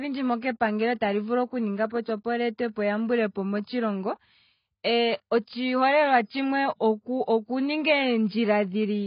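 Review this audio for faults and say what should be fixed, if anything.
Throughout the speech, nothing reaches above 5 kHz, and sibilants sound fizzy and warbling against a dull, smeared tone. This is likely heavy AAC compression, which fits a bitrate of around 16 kbps. On a spectrogram the energy stops at a flat, hard ceiling. Encoding at a much higher bitrate, around 64 kbps or more, would prevent this.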